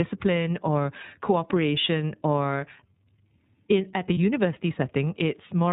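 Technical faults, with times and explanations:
Throughout: iLBC codec. The speech is band-limited, with nothing above 4 kHz, so it sounds muffled and telephone-like. The codec damage is plainly audible as a rough, slightly synthetic buzz, because each frame's excitation is coded separately at a low rate. That roughness fits 30 ms frames at about 13 kbps. On a spectrogram the energy stops sharply at 4 kHz and the harmonics look smeared and grainy. The waveform looks coarser than clean speech.
4.14 to 4.17 s: lost iLBC frames. For roughly 30 ms the sound holds as a brief buzzy, breathy sustain. The decoder filled the gap by repeating the last pitch cycle with added noise, which fits a single lost 30 ms frame. Because the frames stand independently, normal speech returns immediately afterward. A spectrogram shows a short flat stretch where the harmonics freeze in place under a noisy haze. 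The waveform shows a brief run of near-identical repeated cycles.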